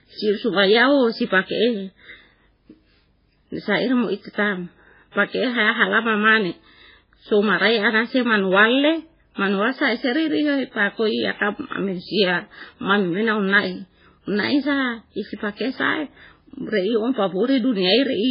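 Speech throughout, with nothing above 5.3 kHz and heavy watery, swirling artefacts, likely MP3 compression at a very low bitrate near 16 kbps; plain low-pass filtering would lack the swirl.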